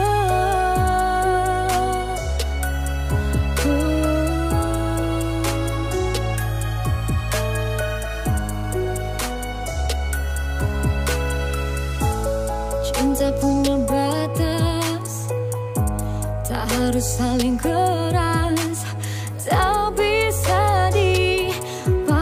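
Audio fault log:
8.13–9.26 s, GSM phone buzz: a nearby 2G handset on a call was transmitting in bursts about 217 times a second, and the audio circuitry rectified those radio pulses into the signal path. The result is a hard, raspy buzz pitched at 217 Hz, dense with harmonics and sitting about 25 dB below the audio. It holds steady for just over a second and bears no relation to the sound itself.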